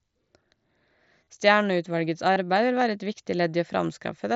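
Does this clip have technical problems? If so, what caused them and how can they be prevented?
Yes. There are two short gaps from concealed Bluetooth headset packet loss, at 1.24 to 1.27 s and at 2.34 to 2.36 s. Voice packets between headset and phone went missing. The receiver filled each hole by repeating the best-matching piece of the waveform just before it. The first patch lasts 30 ms, which fits a run of about four lost frames. The second lasts about 23 ms, closer to three. Each gap sounds like a brief buzzy hold, with a slight warble as real speech resumes. Around the gaps, the mSBC headset codec keeps its usual wideband sound. To prevent the gaps, keep the headset close to the phone with a clear line of sight, and reduce 2.4 GHz interference from Wi-Fi and other radios.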